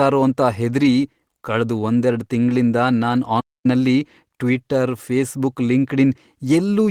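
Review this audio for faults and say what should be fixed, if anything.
Lost packets rebuilt from error correction occur at 0.79–0.85 s and 4.53–4.59 s. Each spot turns rougher and noisier for about 40 ms, which fits two lost packets. The decoder played low-bitrate copies carried in later packets, so there is no gap. Reducing packet loss on the network path would prevent this.

A playback stall cuts the sound mid-flow from 3.40 to 3.66 s. It stays silent for about 240 ms. The player likely ran out of data or had its thread blocked. Output then recovers. A deeper playout buffer and an unblocked audio thread would prevent it.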